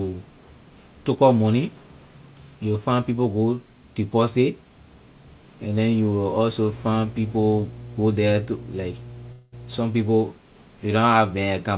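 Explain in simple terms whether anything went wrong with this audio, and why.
Two things go wrong here. From 6.69 to 9.84 s there's mains hum, a steady low 60 Hz drone that creeps in from electrical wiring or a nearby power supply, sitting under the speech.

Near the end of that, from 9.32 to 9.55 s, the sound turns into a brief fading buzz or hiss. That's a long network dropout, likely from audio packets never arriving. The receiver papered over about 0.2 s of lost speech, and that bit is simply gone.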